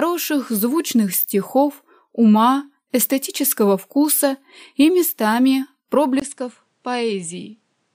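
At 6.2 s the sound cuts out for 20 ms. It returns duller, about 10 dB quieter, with nothing above 10.7 kHz and a fresh noise floor around 45 dB down. This is likely the input switched to a poorer device, until the end.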